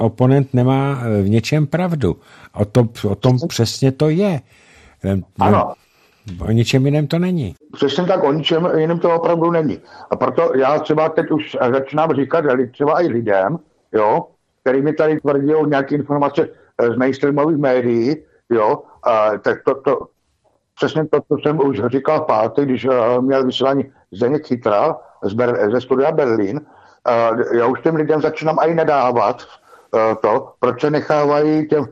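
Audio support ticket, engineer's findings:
MP2 compression, throughout: dull top end, gurgling granular texture. Likely an MPEG Layer II encode near 80 kbps, upper sub-bands switched off and the remaining bands coarsely quantised.

DAB burbling, 20.01 to 20.19 s: short noise blips in single sub-bands. Reception bit errors, around 0.2 percent, passed into the MP2 data, hitting 9 frames.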